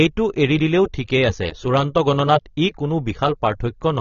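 AAC compression artefacts run throughout this speech clip: nothing survives above about 6.9 kHz, and the sound is dull and smeared with a warbling, fizzy edge on sibilants. The likely cause is AAC-LC coding at a low bitrate, around 24 kbps, discarding and coarsely quantising high-frequency content.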